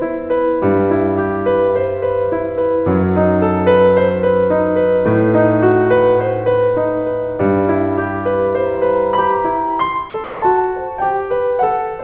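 A piece of music carried over a call path whose narrowband sound, with nothing above 4 kHz, points to G.711 mu-law at 64 kbps, has two faults. From 8.65 s to 9.86 s a single 940 Hz tone swells out of the music over roughly 0.7 s until it is about as loud as the music itself, then stops. This is loudspeaker feedback squeal: a microphone was picking up the loudspeaker it fed, and at 940 Hz the gain around that loop exceeded one, so the tone kept reinforcing itself. Then, from 10.24 s to 10.42 s, the music vanishes for 180 ms and is replaced by a flat bed of steady noise before returning. That gap is likely sound dropped by the voice detector, where the sender's detector mistook the music for background and stopped transmitting, and the receiver filled the silence with comfort noise of the RFC 3389 kind until the detector triggered again.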